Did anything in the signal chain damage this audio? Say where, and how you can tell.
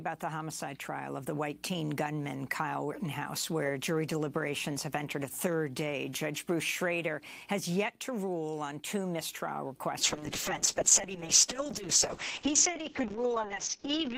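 Yes. A call bitrate drop at the codec stage hits from 10.02 s to the end: the encoder falls from 40 kbps to 6 kbps, bandwidth narrows from 20 kHz to 8 kHz, and the sound turns coarse, watery and muffled. Unlike packet loss, nothing drops out.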